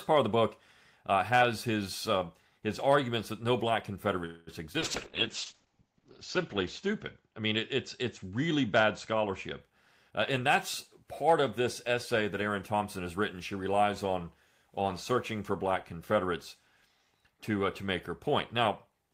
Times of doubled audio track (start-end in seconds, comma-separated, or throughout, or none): none